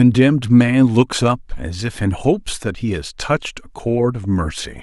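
At 4.24 s the speech picks up a brief DAB burbling artefact. Residual bit errors, at a rate of a small fraction of a percent, got past error correction and corrupted sub-band samples, putting short blips of noise into single sub-bands.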